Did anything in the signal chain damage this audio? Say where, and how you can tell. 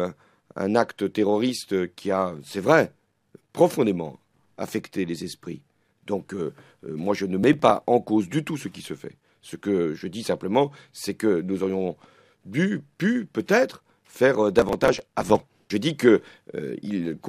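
Yes, processor overload crackle at the driver/buffer stage: gritty bursts at 7.43–7.83 s and 14.59–15.40 s, as tiny buffers of around 1.5 ms repeatedly missed their deadlines and were skipped.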